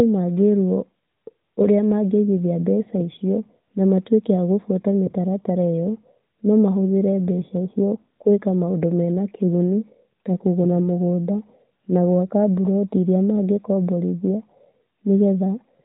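A speech recording with no technical faults to report. It carries the sound of the AMR narrowband mobile codec, with nothing heard above about 3.8 kHz and only light coding texture, which points to the 12.2 kbps mode.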